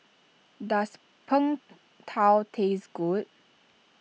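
No technical faults can be heard anywhere in the recording. The speech continues throughout without any audible problem.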